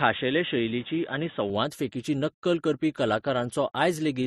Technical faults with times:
0.00-4.27 transcoding between lossy codecs
0.00-1.50 input switched to a poorer device

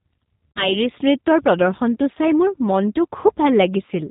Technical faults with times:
0.00-4.10 G.729 codec
0.51-0.77 VoIP packet loss concealed by the speech codec
2.15-2.17 VoIP packet loss concealed by the speech codec

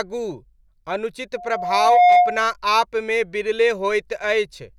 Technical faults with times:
1.36-2.47 loudspeaker feedback squeal

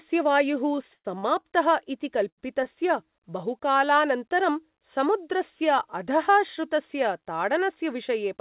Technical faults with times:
0.76-1.46 repeated stalls (stutter)
2.29-2.67 short stall from a late packet

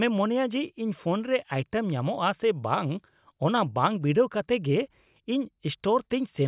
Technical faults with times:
none

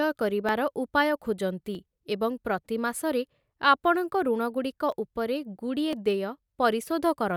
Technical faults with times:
0.49 dropped samples
1.75 dropped samples
4.92 dropped samples
5.93 dropped samples
6.82 dropped samples

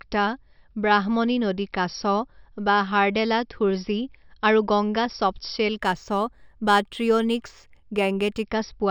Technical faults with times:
5.77-8.43 imaging from linear upsampling

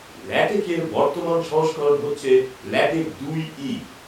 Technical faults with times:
0.60-0.62 corrupt frame decoded

